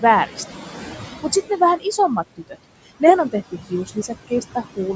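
Noise suppressor artifacts run through the whole clip: steady room noise, about 14 dB below the speech, is pulled down by about 15 dB between phrases and rises again under the voice. Speech cut by the noise suppressor follows from 2.37 to 2.57 s, just before "nehän on", and again from 3.51 to 4.1 s, just after it. In each case the suppressor mistook quiet speech for noise and lowered it by up to about 20 dB and 14 dB respectively, so roughly 150 ms of sound comes out faint or swallowed.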